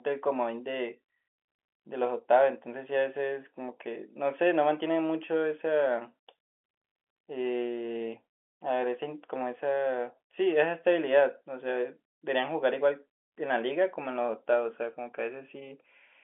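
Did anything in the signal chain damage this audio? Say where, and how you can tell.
No, nothing in the chain hurt this speech; it's just ordinary G.711 telephone coding, which is why the sound sits in a phone-line band of roughly 250 Hz to 3.4 kHz with nothing above about 3.8 kHz.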